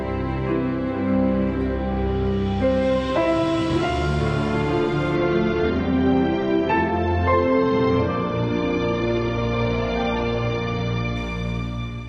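At 5.16 s the audio drops abruptly to an adaptive stream at a lower bitrate, with no gap. Until 11.16 s codec artefacts rise and nothing is heard above 6.8 kHz, which fits a switch from roughly 96 kbit/s to 24 kbit/s AAC during a slowed connection.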